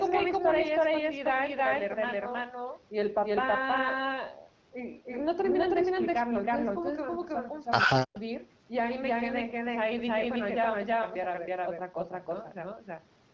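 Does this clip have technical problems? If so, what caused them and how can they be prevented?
Yes. A doubled audio track runs throughout. A full-band copy trails by about 300 ms at roughly equal level, likely from a second, slower capture path. Capture each source only once.

Speech suppressed in double talk occurs from 7.86 to 8.15 s. The voice drops deeply, by about 40 dB, for around 300 ms. This is likely because the echo canceller turned down its own talker along with the loudspeaker echo during overlap. Better echo cancellation and headsets on both ends prevent it.

An echo leak follows from 8.14 to 8.21 s. A faint copy arrives 107 ms late, about 30 dB below the speech. It likely comes from loudspeaker sound the echo canceller missed. Using headphones or tuning the canceller stops it.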